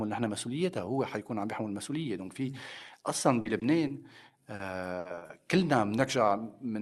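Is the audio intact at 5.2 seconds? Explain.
No. At 5.2 seconds the audio falls inside a burst of repeated packet loss running from 4.99 to 5.31 s. Four gaps occur there, the longest 60 ms. Each is patched by extending the previous sound, so about 120 ms is concealed. The result is choppy, robotic speech with pieces missing.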